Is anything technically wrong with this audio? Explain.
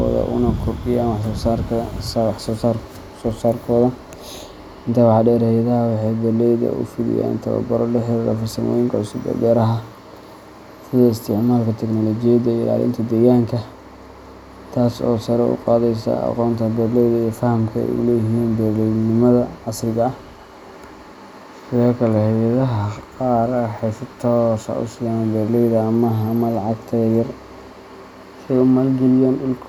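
No, nothing in this speech recording stood out as a technical problem on listening.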